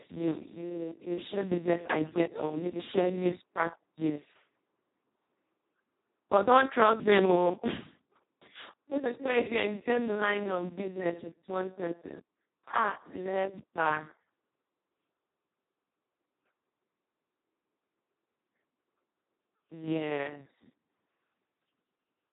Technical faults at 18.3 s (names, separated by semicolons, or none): Speex codec